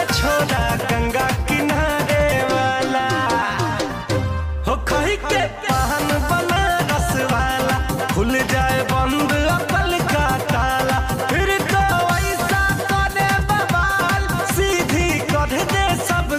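No dropouts, distortion, noise bursts or other technical faults can be heard anywhere in the signal.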